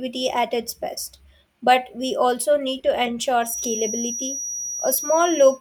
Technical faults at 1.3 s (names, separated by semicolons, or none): none